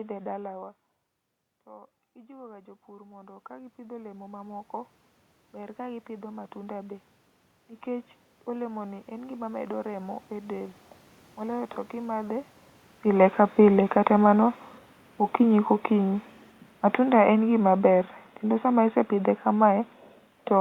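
From 1.66 to 12.4 s the automatic gain control is rising. The talker moves away from the microphone near half a second, and the input drops by about 17 dB. The gain climbs about 20 dB to compensate. Voice and room noise swell together slowly.

From 13.05 s to the end the automatic gain control is falling. The talker comes back closer around 12.5 s, so the boosted gain is now too high. The sound starts loud, then sinks gradually, and the room noise, about 41 dB below the speech, sinks with it.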